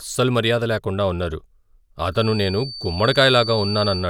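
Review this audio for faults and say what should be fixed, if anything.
A thin, steady whistle at 4.6 kHz enters behind the speech at 2.1 s and holds to the end, swelling and fading slowly in level and sitting roughly 10 dB below the speech. This feedback whistle likely comes from the loudspeaker-to-microphone loop idling just below runaway gain. To prevent it, reduce monitor gain or notch 4.6 kHz.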